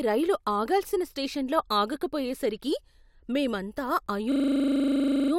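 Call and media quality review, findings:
Tiny skip at 4.06 s; overlap between stream segments, player trimming duplicated timestamps at a segment join, fits 4 s segments, waveform jumps.

25 Hz buzzing stutter, 4.32–5.32 s; system hang loop, driver stalled while hardware replayed one 40 ms ring-buffer chunk 25 times.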